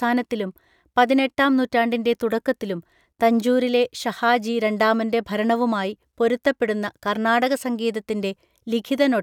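No technical faults can be heard anywhere in the speech.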